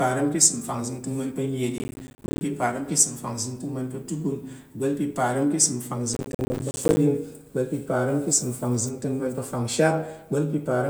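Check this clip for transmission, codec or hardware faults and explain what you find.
Two bursts of processor overload crackle, from 1.78 to 2.41 s and from 6.14 to 6.97 s, after "parəm ka̱ ìsəm". Dozens of roughly 10 ms buffers miss their deadlines, each dropping to silence. The speech sounds gritty and torn.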